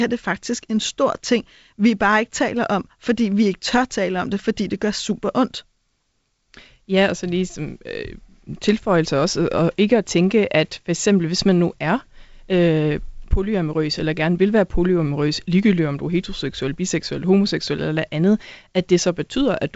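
No technical faults are audible in the speech, which has the character of G.722 wideband telephone coding, with nothing above 7.7 kHz and only the light coding texture that fits a 56 kbit/s setting.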